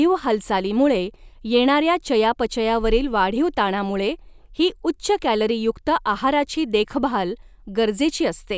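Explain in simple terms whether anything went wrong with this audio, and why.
Nothing stood out as wrong when listening to this speech recording.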